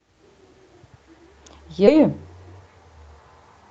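At 1.87 s the speech lurches forward, stitched across a seam lasting only about 10 ms that ends by 2.01 s, with no silence or fill in between. Roughly seven tenths of a second of the talker is simply gone. This is a skip ahead: audio that had queued up late was thrown away so playback could catch up, cutting the delay by about the same amount. The call path, whose ceiling near 8 kHz fits an Opus link, carries the sound on both sides of the jump.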